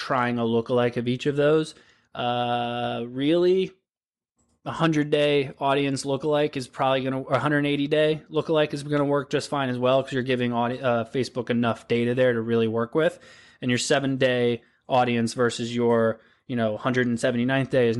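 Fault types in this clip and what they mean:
Bluetooth LC3 compression: The speech has a plainly audible coded quality all the way through, with a grainy, breathy edge on the upper part of the sound. That's likely the LC3 codec used by Bluetooth LE Audio, which chops the signal into short transform frames, and what we hear fits 7.5 ms frames at something around 48 kbps, where the top end gets coarsely quantized.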